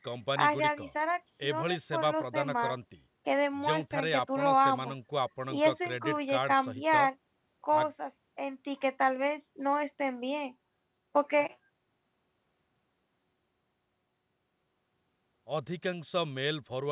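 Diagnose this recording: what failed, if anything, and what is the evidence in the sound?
Nothing in the recording points to a failure at any stage. The speech has come through a working call path, and the sound stops at 4 kHz, which fits a G.711 mu-law codec at 64 kbps.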